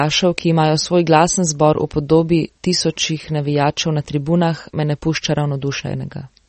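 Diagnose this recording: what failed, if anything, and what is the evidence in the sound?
The codec stage failed, most likely through MP3 compression. The speech has nothing above 8.3 kHz for its whole length. The treble was cut at a fixed point and weak detail flickers, giving a plainly audible watery swirl. That fits a starved bitrate near 32 kbps.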